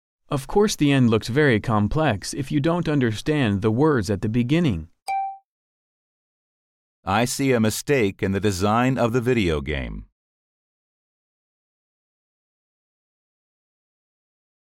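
De-emphasis applied wrongly from 9.62 to 13.14 s: a treble cut with nothing to undo slopes the top away, about 11 dB down at 10 kHz, leaving the sound dull and muffled.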